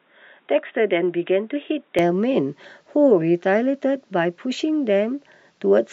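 A speech clip whose opening runs dull and boxy from 0.0 to 1.99 s, with nothing above 3.8 kHz, a level roughly 5 dB lower and a faint new noise floor, then clears abruptly with no gap, likely an input switched to a poorer device.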